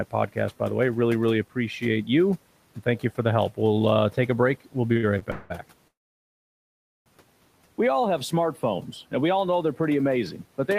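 From 4.93 to 5.52 s the speech suffers repeated stalls (stutter): four short gaps, the longest 185 ms, filled by stretching the last sound, about half that span. Unlike a single freeze, the audio limps through brief halts with nothing lost.

From 5.88 to 7.08 s comes a call audio freeze, likely from packets held up in transit so the jitter buffer ran dry. One continuous 1.18 s hole, almost all true silence with even the room noise gone, then speech resumes intact.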